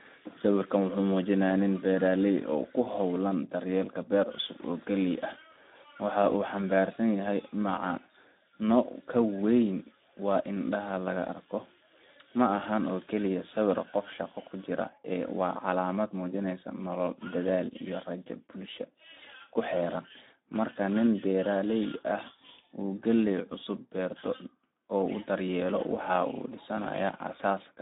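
From start to finish the speech carries Speex codec damage, and it's plainly audible: hoarse and noisy, which fits a setting around 11 kbps starving the excitation. The band sits roughly 200 Hz to 3.7 kHz, with nothing above 3.8 kHz.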